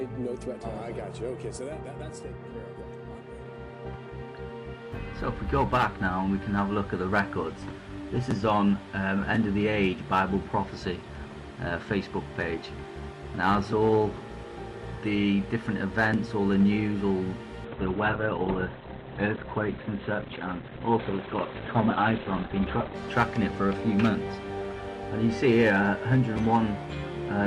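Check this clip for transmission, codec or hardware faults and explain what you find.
One transmission fault is present: a call bitrate drop from 17.65 to 23.01 s. The bandwidth estimate fell, forcing the encoder to code far more coarsely. Audio bandwidth shrinks from 20 kHz to 4 kHz, which fits a fall from about 64 to 11 kbps. The sound turns muffled and rough until recovery.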